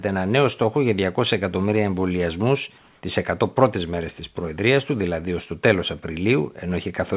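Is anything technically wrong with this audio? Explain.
Yes. Comfort noise in place of the background appears from 2.78 to 3.02 s, just after "εκατομμύρια εμβολιασμού". For those 240 ms the real room tone, sitting about 37 dB below the loud passages, gives way to a flat, featureless hiss about 1 dB quieter. The likely cause is discontinuous transmission: the sender paused during a gap its detector took for silence, and the receiver synthesised shaped noise to fill it. Like the rest of the band-limited call audio, this hiss has nothing above 4 kHz.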